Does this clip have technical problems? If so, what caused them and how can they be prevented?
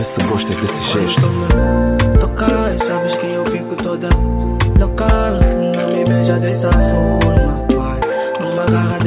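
No, this clip has no technical problems, so there is nothing to trace to a cause or prevent.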